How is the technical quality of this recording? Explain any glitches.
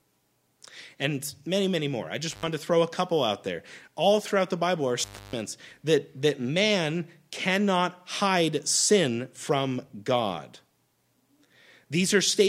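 The recording suffers from an intermittent contact, twice. A loose cable or plug in the signal chain briefly lost its connection, first between 2.31 and 2.47 s, with the line open for about 78 ms, then between 5.00 and 5.34 s, open for about 295 ms. Each time the speech drops out abruptly, with crackle as the contact breaks and remakes, and faint hiss fills the gap. The second dropout is the longer of the two, at nearly 0.3 s.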